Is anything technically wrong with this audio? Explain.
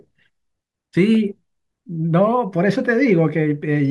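No, nothing technically wrong stood out on listening to this speech clip.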